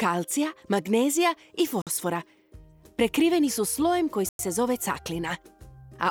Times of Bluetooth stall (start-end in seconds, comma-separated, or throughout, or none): 1.82-1.87, 4.29-4.39